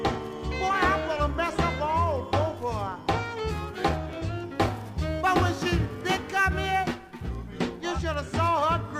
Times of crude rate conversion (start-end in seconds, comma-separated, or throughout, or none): 4.55-7.37